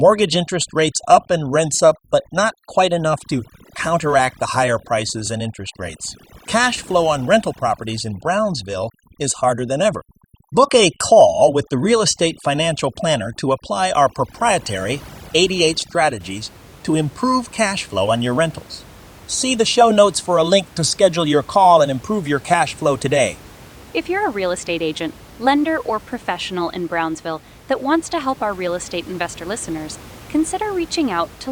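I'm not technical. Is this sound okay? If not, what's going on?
No. For the first 16.2 seconds, overdone noise removal is at work: a cleanup tool set far too strong was scrubbing away anything resembling background hiss, taking the softer parts of the voice with it. The background drops and breaks up into twinkling, warbling specks.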